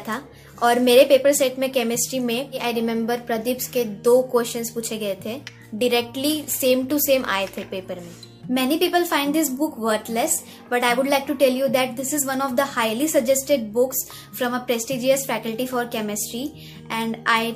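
No dropouts, distortion, level jumps or timing faults turn up anywhere in the recording.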